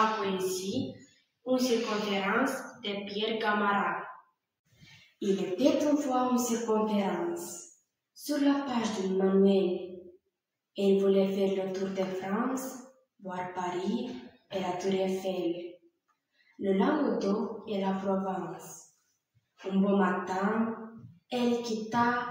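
Sound cut by the noise suppressor occurs at 0.95–1.46 s, 14.29–14.52 s, 15.76–15.99 s and 16.37–16.59 s. The suppressor misreads sustained sound as noise and pulls it down by about 18, 17, 19 and 11 dB, so those stretches sink in level.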